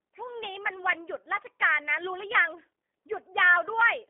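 From start to finish the speech runs through the G.729 codec, and the damage is plainly audible. Everything sits inside a phone-line band of roughly 300 Hz to 3.5 kHz, so it sounds boxed in. The codec doesn't store the waveform directly. It rebuilds each 10 ms frame from a vocal tract filter, a pitch predictor and a handful of pulses, which fits an 8 kbit/s stream. That rebuilding leaves the voice intelligible but a bit rough and synthetic.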